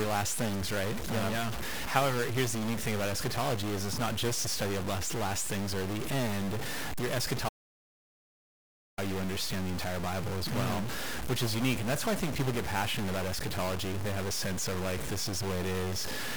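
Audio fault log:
Throughout: stuck bit. There's a distorted grit riding on everything, and the quiet stretches hiss instead of going still, likely one converter bit jammed at a fixed value.
7.49 to 8.98 s: audio dropout to silence. The sound cuts out mid-flow for about 1.5 s of dead silence, no room tone, likely a lost input link.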